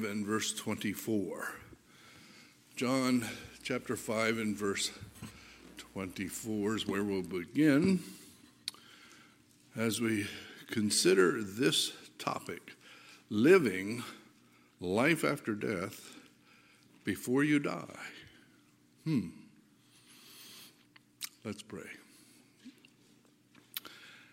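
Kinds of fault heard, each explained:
Mains buzz: A raspy buzz sits under the sound from 3.13 to 7.33 s, then stops. It is built on 60 Hz mains. Sharp switching spikes, twice per cycle, get into the signal path, perhaps through a dimmer, rectifier or poor shielding. Their harmonics stack up well above the fundamental and give the edge its grit. It sits roughly 30 dB below the sound, so it is quiet.
Corrupt frame decoded: Two short bursts of wrong-sounding energy appear where the decoder played damaged compressed data as if it were valid. Flipped bits scramble gains and codes, so energy lands at the wrong frequencies. The first, from 9.89 to 9.98 s, lasts nearly 0.1 s, which points to several consecutive bad frames. It is moderate in level. The second, from 21.22 to 21.25 s, is shorter and fits a single frame, but it is louder.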